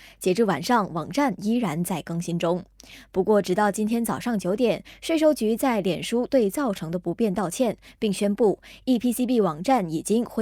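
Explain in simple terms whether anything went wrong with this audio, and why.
Nothing went wrong; the speech comes through without any faults.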